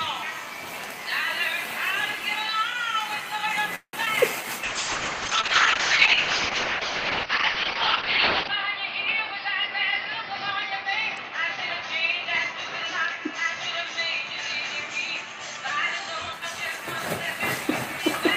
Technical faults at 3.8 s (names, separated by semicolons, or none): call audio freeze